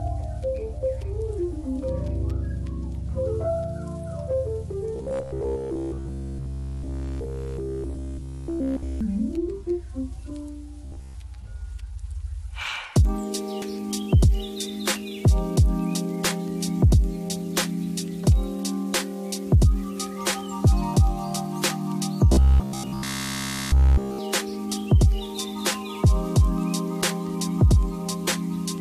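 From 4.96 to 9.01 s, and again from 10.85 to 11.15 s, the sound turns into a rigid metallic buzz at 66.8 Hz. This is robotic sound, likely from repeated short buffers of about 15 ms. At 13.61 s, compressed frames are skipped, about four frames of 21.3 ms. The audio jumps ahead roughly a tenth of a second. The same robotic buzz returns from 22.33 to 24.19 s. Another skip of about four frames occurs at 28.27 s.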